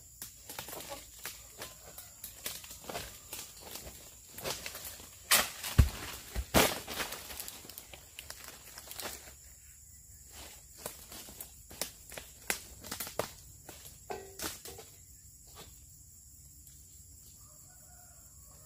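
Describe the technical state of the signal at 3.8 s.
At 3.8 s the signal is intact, with no audible dropout, distortion, glitch or other fault at that point.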